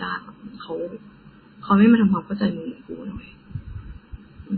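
From start to end, the speech carries channel delay (comb filtering). One channel runs roughly 0.7 ms behind the other, and when the two are summed to mono, the shared content cancels at evenly spaced frequencies, with the first notch around 700 Hz and further notches repeating about every 1.4 kHz. The result is hollow and phasey. A spectrogram shows fixed dark horizontal stripes through every frame that stay put regardless of what is said.

Also running the whole length is a smeared, watery quality with a hard ceiling: nothing is present above 4.6 kHz, so sibilants lose their bite and turn swirly and metallic, while consonant attacks blur. This is likely MP3 compression at a very low bitrate, which fits something near 16 kbps. The encoder cuts the treble at a fixed point and drops weak frequency lines that flicker on and off between frames. On a spectrogram, energy stops at a flat edge near 4.6 kHz, with patchy, blocky holes below it.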